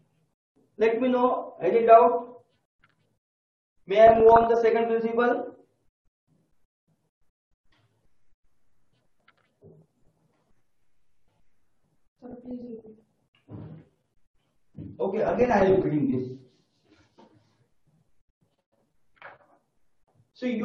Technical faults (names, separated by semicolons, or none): DAB burbling